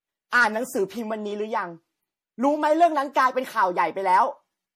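Throughout, the speech sounds swirly, hollow and smeared, with blurred onsets: likely generation loss, roughly seven MP3 passes near 64 kbit/s stacking fresh quantisation noise.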